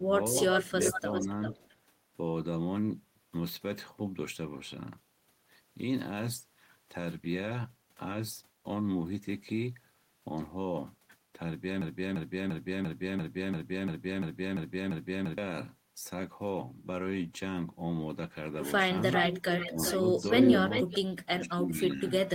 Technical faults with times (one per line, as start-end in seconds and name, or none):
0.00-0.07 speech suppressed in double talk
0.55-1.75 echo leak
0.97-1.29 speech suppressed in double talk
1.54-1.59 speech suppressed in double talk
11.81-15.38 broken-record loop
19.10-20.99 echo leak
19.66-20.05 speech suppressed in double talk
21.20-22.29 speech suppressed in double talk